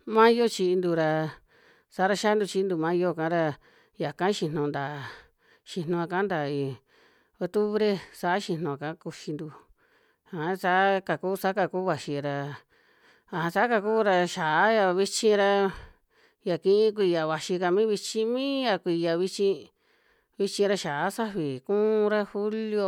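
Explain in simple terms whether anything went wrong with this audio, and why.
Nothing went wrong that a listener would notice: the speech in this recording came across steadily, with no dropouts, glitches or odd sounds standing out at any point.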